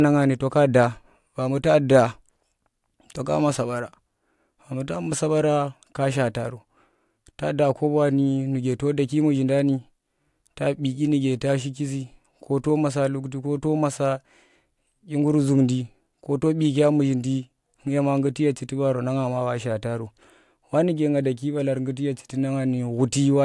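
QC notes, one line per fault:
No faults found in this speech clip. Nothing here needs a QC flag.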